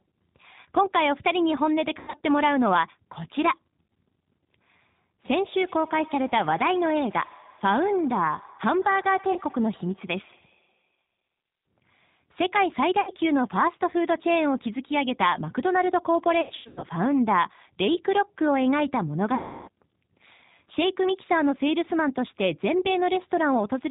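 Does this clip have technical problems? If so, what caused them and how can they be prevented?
Yes. The whole recording carries plainly audible G.729 codec damage. Nothing above 4 kHz survives, and the speech has the slightly rough, synthetic texture of a low-rate coder that rebuilds each 10 ms frame from a vocal-tract filter, a pitch predictor and a few pulses. The sound fits the 8 kbit/s G.729A variant. To prevent it, negotiate a wideband codec such as G.722 or Opus for the call leg.

There is also VoIP packet loss concealed by the speech codec at 1.99–2.21 s, 9.33–9.38 s, 13.01–13.11 s, 16.41–16.86 s and 19.35–19.69 s. The longest gap, about 330 ms of missing audio, comes at 19.35 s. The 2 s and 16.4 s events are scattered runs of up to 90 ms each. In each gap the decoder extends the last pitch and filter with decaying gain, so the sound smears into a fading buzz and stays weak for a while after the audio resumes. 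The gap lengths fit 30 ms packets. To prevent it, fix the network path or add jitter buffering and forward error correction.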